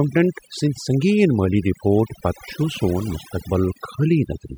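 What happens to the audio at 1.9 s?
At 1.9 s the speech is under overdone noise removal, which runs through the whole clip: an over-aggressive denoiser shuts off individual frequency bands that sit near its noise estimate, taking quiet speech detail with them. Unlike a codec's smeared, swirly artefacts, the background drops and breaks up into twinkling specks.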